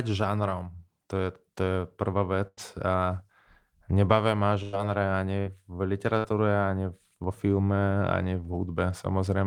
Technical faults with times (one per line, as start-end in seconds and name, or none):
2.47-2.60 burst of packet loss
4.63-4.78 burst of packet loss
5.40-5.49 burst of packet loss
6.18-6.27 burst of packet loss